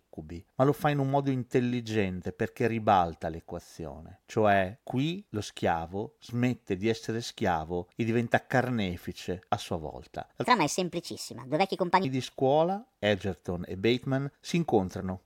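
A section at the wrong speed runs from 10.44 to 12.05 s in this speech recording, lasting about 1.6 s. Across that stretch the voice plays back 1.4 times faster than it was captured, so it sounds both hurried and raised in pitch by roughly five semitones, then snaps back to its normal rate and register. Because speed and pitch shift together, this is likely a playback or editing step that clocked that segment at the wrong rate.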